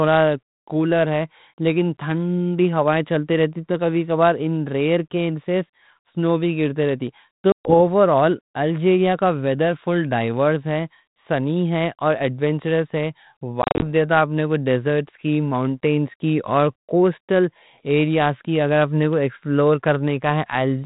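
Packet loss on an ADPCM call hits at 7.52 s, with 130 ms lost before 7.74 s. At 13.62 s, 140 ms is lost in runs of up to 30 ms scattered over 200 ms. Each time the decoder's predictor and step size desynchronise, so speech resumes slightly distorted before settling.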